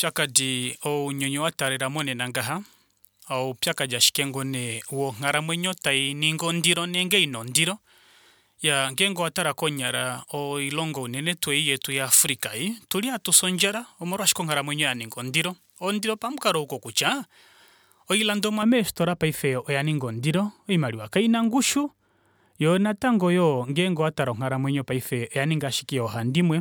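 Pre-emphasis left on, from the start to 18.6 s: the treble lift applied for recording or transmission was never undone, leaving highs about 11 dB hotter at 10 kHz relative to 1 kHz, which fits a J.17 curve. The speech sounds thin, bright and sibilant.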